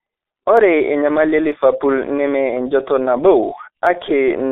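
From the start, the speech has been squeezed through a G.723.1 codec at what sounds like a 6.3 kbit/s rate. It's heavily damaged: a narrow 250 Hz to 3.6 kHz line band, nothing above 4 kHz, and slow model updates leaving it muffled, hoarse and smeared on consonants.

Then there are single sharp clicks at 0.57, 1.52 and 3.87 s, likely from dropped samples, where a tiny sliver of the stream, a fraction of a millisecond, goes missing and the waveform jumps abruptly, too brief to lose any sound.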